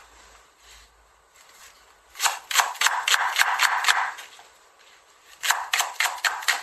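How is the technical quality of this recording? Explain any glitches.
The quality is poor: the whole clip has a swirly, smeared, hollow character from start to finish. Nothing comes through above 15.3 kHz, and transients lose their edges. That points to generation loss, likely from the audio going through lossy MP3 encoding around seven times at something like 64 kbit/s. Each re-encode quantises on a slightly shifted frame grid, so the noise and spectral gaps stack up. That's why it sounds worse than a single low-bitrate pass would.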